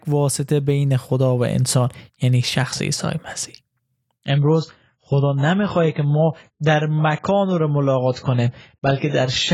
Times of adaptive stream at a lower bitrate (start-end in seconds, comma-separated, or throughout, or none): 4.28-9.54